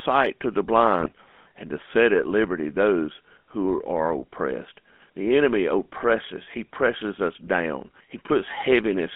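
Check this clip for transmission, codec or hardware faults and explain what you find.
Two problems here: a codec colouring the whole clip, plus one short burst of corruption.

The GSM full-rate codec runs the entire length. It's band-limited to roughly 200 Hz to 3.4 kHz, and it rebuilds speech from a vocal-tract model driven by a coarse pulse excitation. That leaves a constant buzzy, gravelly grain that fits the old 13 kbps full-rate coder.

GSM bit errors hit from 1.00 to 1.09 s, right after "to the" and before "and to set at". Corrupted filter, pitch and gain values throw the decoded frames off, so you hear a brief squawky, gargling break. The length points to about four spoiled frames.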